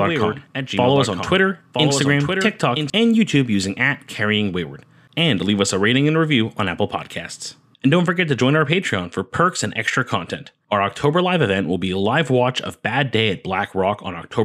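A doubled audio track runs from the start to 2.9 s: a second, full-band copy of the speech trails about a second behind, a few decibels quieter and without any room colour, then stops abruptly. This is likely a second capture through a slower path.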